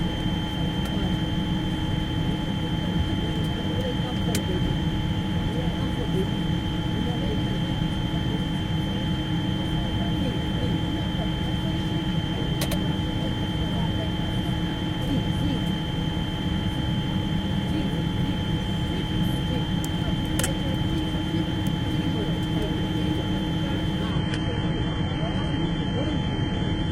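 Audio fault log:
24.11–26.91 s, adaptive stream at a lower bitrate: the audio switches abruptly, with no gap or dropout, to a thinner version for the final stretch. Nothing remains above about 10.5 kHz, and coding artefacts rise, which suggests the stream fell back from a mid-rate AAC feed to a very low-bitrate HE-AAC one after the connection slowed. A steady filter would affect the whole clip, and a network dropout would leave a silence, but this is a sudden quality step that lasts to the end.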